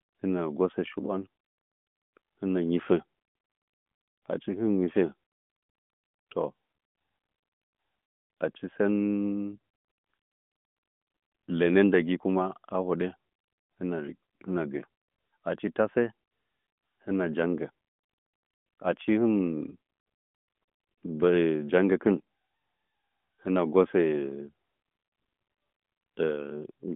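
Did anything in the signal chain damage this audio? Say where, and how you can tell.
Yes. The damage is in the network stage, as lost AMR speech frames. From 3.96 to 3.98 s the speech has a brief dip or warble. It lasts about 20 ms, which points to a single lost frame. Radio errors made that frame fail its checksum. The decoder then filled the gap by reusing the last good pitch and vocal tract settings at reduced gain. The narrowband mobile codec itself is audible as the 200 Hz to 3.5 kHz phone band.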